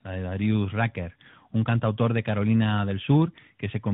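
From start to finish the speech sounds rough, dull and warbling, with nothing above about 3.8 kHz. These are the marks of tandem speech coding. The audio appears to have crossed a chain of G.726 at 32 kbit/s, G.711 mu-law and finally AMR-NB at 12.2 kbit/s, which puts two speech coders in a row. The AMR-NB stage had to encode audio that G.726 had already degraded, so the artefacts of the two coders piled up.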